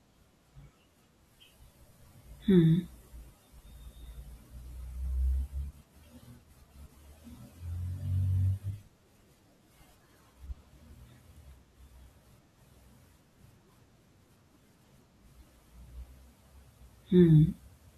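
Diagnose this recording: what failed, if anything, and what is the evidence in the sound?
Nothing stood out on listening to this speech recording, and there is no failure to diagnose.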